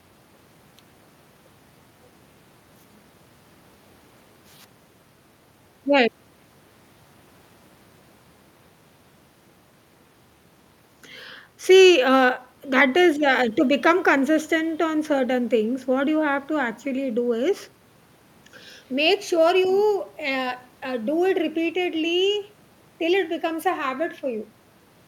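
Listening closely to the speech, nothing stood out as a technical problem at any point.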